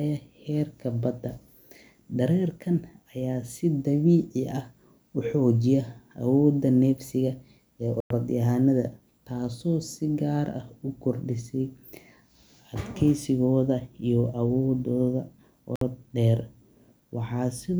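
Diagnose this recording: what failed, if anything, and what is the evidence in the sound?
Speech drops to silence at 8.00 s for 101 ms and at 15.76 s for 57 ms. Likely a Bluetooth stall at playback: the buffer ran dry awaiting resent packets.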